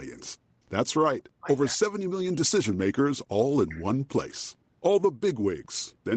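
A speech recording over a call, with the top end stopping near 8 kHz, as an Opus link at a modest bitrate would. The voice is pushed down twice, from 1.19 to 1.47 s and from 3.46 to 4.55 s. The level falls by roughly 40 dB over about a third of a second and then most of a second. This is speech suppressed in double talk, likely an echo canceller mistaking the talker for loudspeaker echo while the far side spoke.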